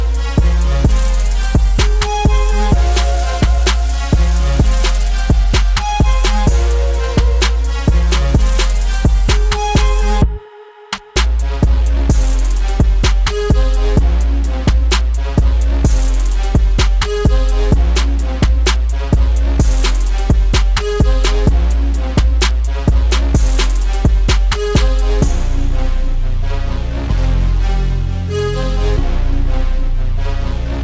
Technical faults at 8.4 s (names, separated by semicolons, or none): none